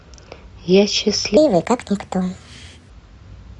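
A playback or editing stage likely ran on the wrong clock for part of this speech clip, creating a section at the wrong speed: from 1.37 to 2.90 s the audio plays 1.41 times too fast, so speech jumps about seven semitones higher and sounds hurried.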